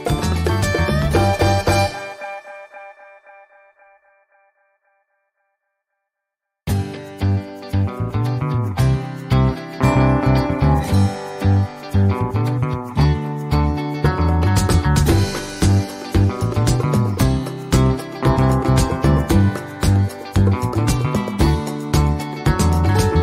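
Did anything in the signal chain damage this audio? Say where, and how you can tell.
No, no signal-chain damage heard.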